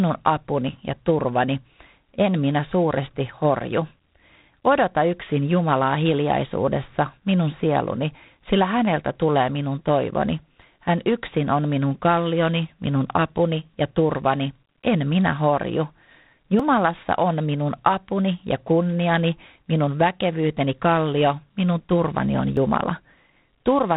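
G.726 ADPCM coding at 24 kbit/s runs through the whole clip. Each sample is sent as a few bits of difference from a predicted value, too coarse at this rate, so the speech carries a harsh, rasping hiss that rises and falls with its level, and nothing above 3.9 kHz survives.

Audio missing between chunks then appears at 4.65 s, 10.62 s (just after "häneltä tulee minun toivoni"), 16.6 s (just before "on minun apuni ja") and 22.57 s (just after "kallio minun turvani on"). Each is a skip of about 30 ms, spliced shut without silence, recurring roughly every 6 s. It is likely caused by processing in 6-second chunks and dropping a sliver at each handover.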